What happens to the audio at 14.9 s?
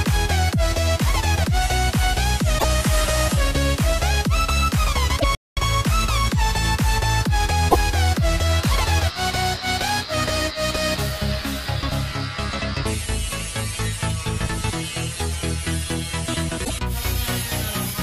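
Nothing goes wrong at 14.9 s; the audio plays through that moment intact, with no dropout, click or other fault.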